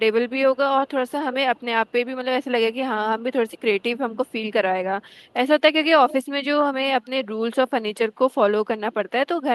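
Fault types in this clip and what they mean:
Echo leak: short, faint scraps of the speech return about 0.34 to 0.36 s late. Most are about 40 dB below it; the one at 6.09 s is about 20 dB down. The likely cause is a far-end loudspeaker whose echo canceller let pickup through.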